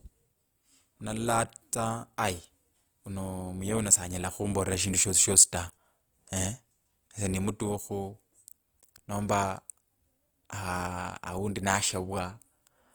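Throughout, the speech has likely gone through Opus compression in its music mode at a low bitrate, fitting about 24 kbps. Starved of bits, the encoder fills bands by folding or with noise, so the speech turns plainly rough and grainy, though it still reaches about 20.2 kHz.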